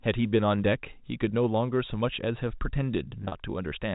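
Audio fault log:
3.22 to 3.32 s, packet loss with pitch repetition: about 70 ms of audio drops out in short gaps scattered across 100 ms, the longest run near 40 ms. The receiver fills each gap by repeating the last pitch period, so the sound briefly holds as a slightly buzzy, frozen tone rather than falling silent. The gaps are short enough that the repeated cycle bridges them before any fade to silence, while the G.711 telephone band stays intact around the event.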